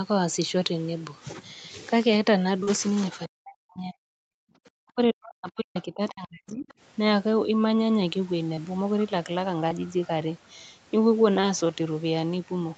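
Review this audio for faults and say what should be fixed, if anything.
Short concealed packet loss at 2.63–2.69 s: about 40 ms never arrived and was extrapolated from preceding sound, giving a brief smear rather than the clean level dip of suppression.

Speech suppressed in double talk, at 3.26–4.07 s and 4.67–6.69 s: the talker drops by up to about 40 dB in pieces, likely because the echo canceller clamped both voices. These are long and patchy, unlike a momentary gate.

Background gated by the echo canceller at 4.35–4.39 s: room sound falls about 40 dB for only 40 ms, then returns when the canceller releases.

Other side's voice leaking through at 5.78–5.82 s and 6.68–6.73 s: faint scraps, about 25 and 35 dB below the talker, likely residual loudspeaker echo that was not cancelled. Unlike suppression, these add sound rather than remove it.

Preventing these means using a headset or a better-tuned echo canceller with improved double-talk detection, and a deeper jitter buffer to reduce late packets.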